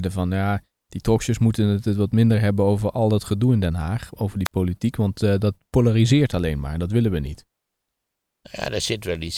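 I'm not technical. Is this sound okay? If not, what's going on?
No. At about 4.45 s there is a wireless microphone squelch dropout lasting until about 4.52 s. The radio link from the microphone weakened, a short burst of hiss crept in, and the receiver then muted itself for about 51 milliseconds, leaving a brief hole before the speech came back. That hiss just before the gap is what sets it apart from a digital dropout, which cuts to silence cleanly with no static first.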